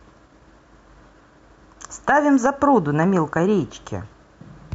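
Nothing is technically wrong with this speech recording.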